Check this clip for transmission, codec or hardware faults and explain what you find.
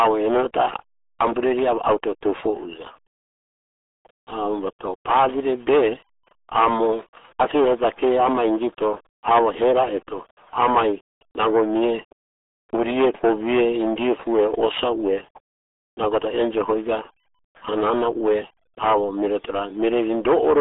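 The speech has gone through a very low-rate dial-up speech codec, the RealAudio 14.4 codec, and the damage runs through the whole recording. Audio was squeezed through a narrow telephone-style band of roughly 300 Hz to 3.5 kHz and coded so coarsely that the result fits an 8 kbit/s stream. Nothing survives above about 3.8 kHz, so the speech sounds muffled, and the heavy coding damage adds a gargly, watery roughness to every syllable.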